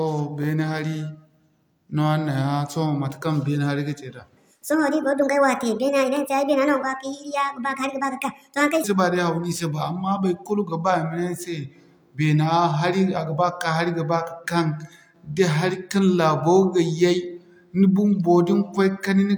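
A speech clip with a section at the wrong speed from 4.37 to 8.84 s, running 1.55 times too fast, so the voice turns hurried and about seven semitones higher. A spectrogram shows the harmonics stepping abruptly upward and syllables squeezed closer together; likely a playback or editing clock mismatch.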